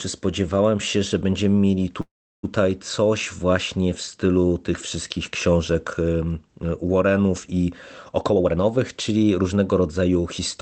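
A call audio freeze runs from 2.01 to 2.45 s. The last sound is stretched into a brief buzzy continuation that fades out, and roughly the final 0.34 s of the hold is silent. The likely cause is packets delayed in transit long enough to drain the jitter buffer. When they arrived, playback resumed exactly where it had stopped, so about 0.42 s of gap was inserted, nothing was lost, and everything after it runs that much later.

A jitter buffer speed-up follows from 8.17 to 10.23 s. The buffer was holding more audio than its target, so the receiver repeatedly cut out short slices one or a few pitch periods long, trimming around 0.4 s in total. The sound plays at about 120% of normal speed while keeping its pitch, so this stretch comes across as hurried. The band-limited Opus call path, cut off at 8 kHz, runs throughout the clip and suggests a low call bitrate around 20 kbps.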